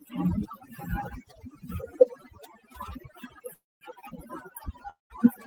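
A speech recording with overdone noise removal running throughout: the background is pushed down and breaks up into twinkling specks. Two call audio freezes occur, at 3.53 to 3.83 s and 4.90 to 5.12 s. Each begins with a brief fading tail, then goes silent for about 220 ms and 150 ms respectively, before the speech resumes where it stopped, with nothing lost but the timing pushed back. The likely cause is delayed packets draining the jitter buffer.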